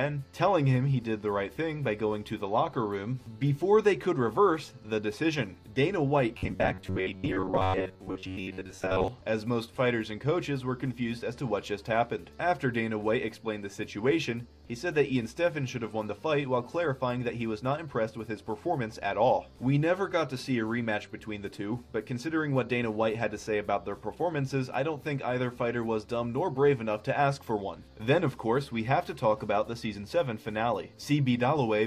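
A likely audio-delivery stall between 6.37 and 9.08 s left the playback software without fresh data, so it kept repeating the last short buffer, around 10.7 ms long, and skipped roughly 70 percent of the real audio in that stretch. This is robotic sound from repeated short buffers: the loops impose a fixed buzz at 93.8 Hz, turning the sound rigid and metallic while its original contour comes through only loosely.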